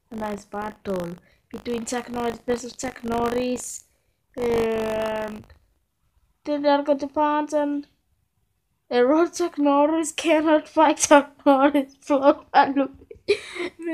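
From the start to 6.2 s, the audio carries buffer tearing. A rattling 50 Hz buzz rides on the sound, which fits 20 ms buffer periods. The writer and hardware have slipped, so a small slice of each period replays audio from about 40 ms earlier.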